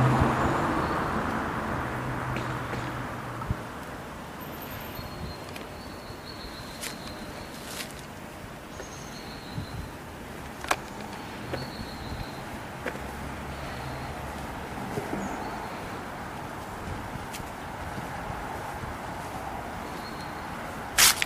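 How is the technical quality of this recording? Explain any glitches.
The recording has two glitches, both compressed frames skipped. At 3.42 to 3.45 s, roughly 150 ms of audio vanishes. At 8.29 s, about 50 ms goes. Whole compressed frames were lost or rejected as damaged. Each time, the audio jumps ahead by the length of the missing frames.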